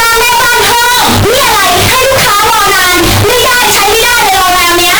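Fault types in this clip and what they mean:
float read as integer: 32-bit float samples were likely read as 32-bit integers, turning the speech into a harsh, near-square signal at an almost fixed, high level, pitch still audible.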